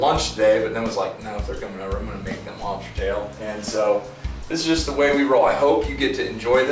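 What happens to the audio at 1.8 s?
Nothing goes wrong at 1.8 s; the audio plays through that moment intact, with no dropout, click, glitch or other fault to be heard.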